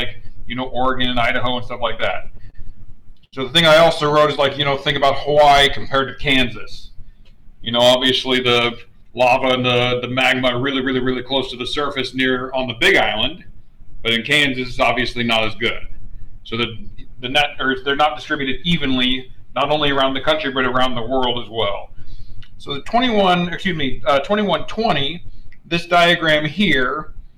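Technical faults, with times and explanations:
Throughout: hard clipping. The level overran what the stage could pass by about 10 dB, so around one percent of samples have their peaks sliced flat. Those squared-off tops add high harmonics, giving crackle and a harsh edge on louder moments.
1.87 to 3.35 s: repeated stalls (stutter). Audio arrived too slowly eight times, and each time the receiver held the last sound going until more came, 177 ms in all, the longest wait 81 ms. Nothing is lost, but the sound drags and hitches.
4.07 to 6.22 s: jitter buffer slow-down. With its reserve running low, the receiver repeated single pitch periods and pause fragments over and over, adding 132 ms. Playback runs at 94 percent speed with pitch unchanged, so sounds are drawn out.
4.50 to 4.79 s: scattered short gaps. Inside that slowed stretch, about three isolated packets went missing or late, each a few milliseconds at most, around 20 ms altogether. 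The receiver patched each by extending the previous sound, leaving small ticks or smears.
8.72 to 10.92 s: jitter buffer speed-up. Too much audio had piled up in the buffer, so the receiver cut out short pieces of one or a few pitch periods repeatedly, roughly 150 ms. Playback runs at 107 percent speed at the same pitch, sounding hurried.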